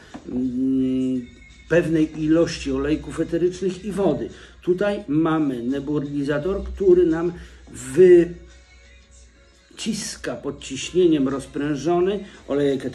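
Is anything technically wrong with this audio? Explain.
No, nothing technical stands out here; the audio just runs along as it should with no glitches to point at.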